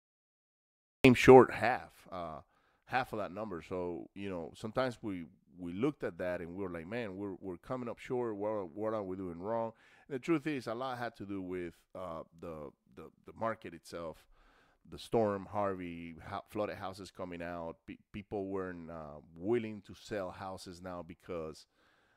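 The capture began late: the audio opens on digital silence until 1.05 s, where it cuts straight in partway through the speech. That is a cut-off start, with no natural attack or fade-in, so the sound appears abruptly rather than building up.

From 1.38 to 1.82 s, a gain drop of roughly 15 dB is applied in coarse steps, around 150 per second, with no smoothing between them. The result is zipper noise, a fast ticking or buzzy zipping riding on the speech while the level falls.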